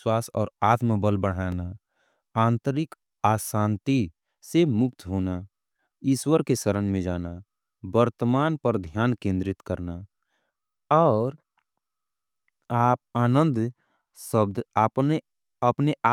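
Speech with a repeated buffer at 1.52 s, right after "और आत्म बल": a piece about 2.7 ms long plays twice, which fits a 128-sample buffer. It is heard as a brief click, not a silent dropout, because the gap is filled with repeated audio rather than left empty.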